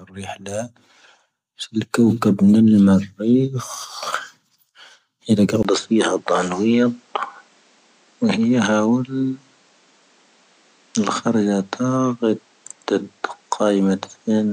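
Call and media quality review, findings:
Input switched to a poorer device, 5.63 s to end. 20 ms gap, then speech duller, about 5 dB quieter, nothing above 9.1 kHz, new noise floor about 35 dB down. Likely capture-path device change; noise and level step rule out codec bandwidth drop.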